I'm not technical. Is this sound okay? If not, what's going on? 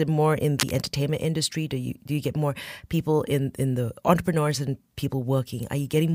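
No. From about 0.58 to 0.87 seconds, a brief burst of rough scratching and rustling sits over the speech, nearly as loud as the speech itself. This is cable scratch noise, most likely from a worn cable, plug or knob being moved so its electrical contact flickered. Unlike a single click or pop, it is a dense, uneven crackle lasting around a third of a second.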